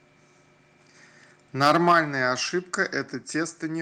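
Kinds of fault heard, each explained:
Microphone overload: From 1.61 to 1.99 s the loudest peaks turn harsh and crackly, their tops flattened. The likely cause is a microphone input set too high, pushing peaks about 8 dB past the converter's limit so that a few percent of samples are clipped.
Microphone volume stepped down: At 1.92 s, right at the end of that distorted stretch, the voice and the background drop together by about 6 dB in one abrupt step. This is likely call software reacting to the clipping by lowering the device's input volume.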